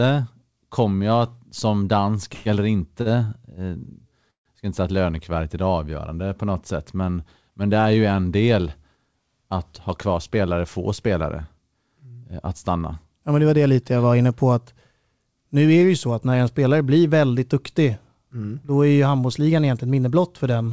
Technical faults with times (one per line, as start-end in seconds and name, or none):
2.34-2.47 call audio freeze
3.01-3.08 short stall from a late packet
4.30-4.47 call audio freeze
9.79-10.45 jitter buffer speed-up